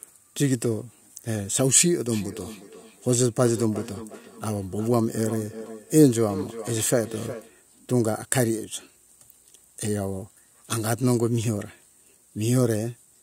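A speech recording with feedback echo between two devices from 2.12 s to 7.52 s. The speech returns at a steady interval of roughly 400 ms, peaking about 14 dB below the direct speech. This happens when two devices in one room join the same call: one device's loudspeaker replays what the other's microphone sent, and that microphone picks it up again. Each device's echo canceller removes only its own playback, so the loop goes unsuppressed.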